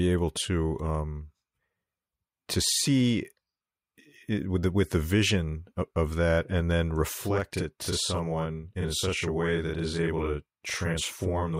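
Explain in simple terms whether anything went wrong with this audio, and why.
From 7.15 s onward, one channel runs 43 ms late. Once mixed, this channel delay (doubling) makes the speech sound doubled, like a quick slap echo.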